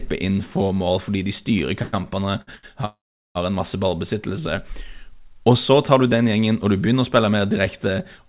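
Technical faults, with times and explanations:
1.82 to 2.65 s, repeated stalls (stutter): packets kept reaching the receiver late, so its jitter buffer ran dry four times in under a second, the longest wait about 107 ms. Each time the last sound was stretched to bridge the hole, about 250 ms in total, roughly 30% of that stretch. Nothing is lost, but the speech drags and hiccups as it stops and restarts in quick succession.
2.85 to 3.37 s, call audio freeze: the playback stops for about half a second and then resumes exactly where it left off, so a gap of about 501 ms has been inserted into the speech with nothing missing. The last sound is held and fades to silence for about 400 ms of that span. The likely cause is packets held up in transit, emptying the jitter buffer until they arrived, which also pushes everything after it later by about 501 ms.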